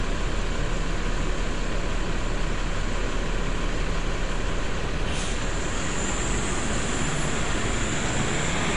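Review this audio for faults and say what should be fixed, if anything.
Low-bitrate AAC compression has likely been applied throughout, consistent with AAC-LC at around 32 kbps. The encoder discards everything above 10.5 kHz and quantises the remaining spectrum coarsely, so the sound is dull and smeared, with plainly audible coding damage. Encode at a higher bitrate from a lossless master, compressing only once at the final stage.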